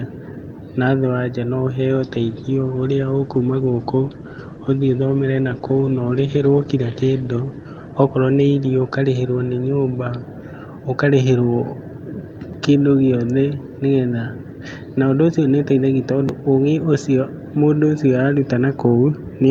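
Speech with a call bitrate drop from 1.94 to 10.55 s: coarser coding and a top end cut from 20 kHz to 12 kHz, consistent with roughly 48 falling to 15 kbps, lowest for about 5 s.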